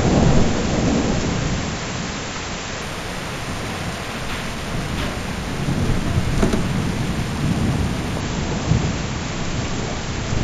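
A clip of everyday sounds, and from about 2.82 s to 8.20 s you can hear imaging from linear upsampling. The rate was raised by joining samples with straight lines, which fits a 16 kHz source taken up to 48 kHz. That crude interpolation barely filters, so the top of the band goes soft while a mirrored copy of the spectrum sits between 8 kHz and 16 kHz, roughly 25 dB down, adding a faint metallic shimmer to the bright edges of the sound.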